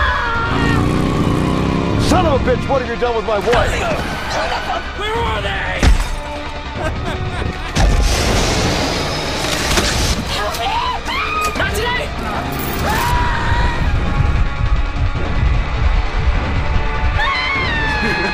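Nothing is technically wrong with the audio.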